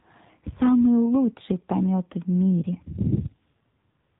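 From start to finish the speech carries AMR narrowband mobile codec damage, plainly audible throughout. Nothing above 4 kHz survives, so sibilants and breath lose their edge and the voice sits in a boxed, telephone-like band. The codec rebuilds speech from a vocal-tract filter excited by sparse pulses in 20 ms frames. With too few bits for that excitation, the voice takes on a synthetic, buzzy texture, which fits a 7.4 kbps mode.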